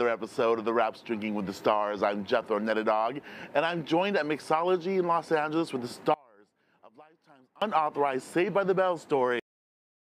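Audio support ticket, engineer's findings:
One channel inverted, 6.14 to 7.62 s: level collapses about 29 dB on mono sum, centred content nearly gone. Likely one stereo leg polarity-flipped, common signal cancelling, only channel difference left.

Cut-off end, 9.40 s: audio stops mid-sound, straight to digital silence, no decay. Final buffers never written or played out; stream truncated before flush.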